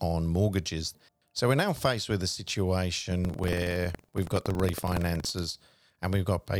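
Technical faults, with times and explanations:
3.20–5.47 s, buffer tearing: writer and reader of the ring buffer have slipped, so each period splices in a small slice of audio about a tenth of a second old. The result is a 21.5 Hz robotic rattle, fitting a 2048-sample buffer; waveforms show regular hard joins, spectrograms evenly spaced vertical lines.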